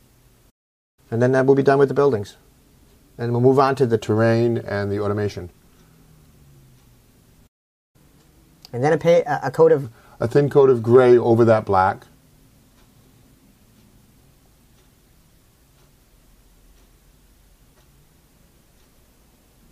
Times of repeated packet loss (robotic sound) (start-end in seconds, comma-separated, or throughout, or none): none